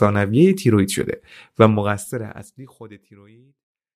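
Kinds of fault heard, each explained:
No technical fault can be heard in this speech clip. From roughly a second and a half in, the level eases smoothly down to silence at the end, the way an editor's fade-out would, with no click or hard edge.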